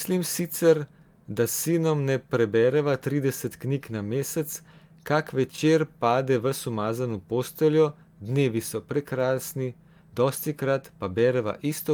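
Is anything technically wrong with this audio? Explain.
No, there is nothing technically wrong with this speech recording. Listening through it, I hear no fault to point to at any moment.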